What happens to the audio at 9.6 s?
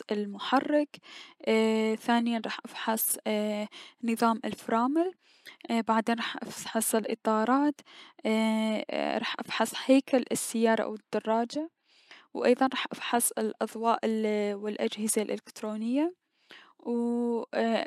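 Nothing goes wrong at 9.6 s: the speech carries on intact through that moment, with no dropout, click or other fault to be heard.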